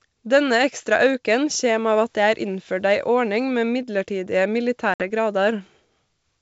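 At 4.94 s, packet loss on an ADPCM call leaves a hard-edged 60 ms silent gap, a flat waveform and blank spectrogram column, then slightly distorted speech until 5.04 s.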